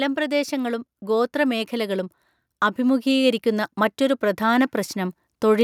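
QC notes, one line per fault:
0.15–2.17 s and 2.76–5.59 s, automatic gain rising: in each stretch the level climbs steadily, by about 4 dB, with the speech and the background noise floor swelling together rather than the talker getting louder alone. That shared rise is the signature of an automatic gain control judging the input too quiet and easing its gain upward over a couple of seconds. The first ramp runs about 2 s and the second nearly 3 s.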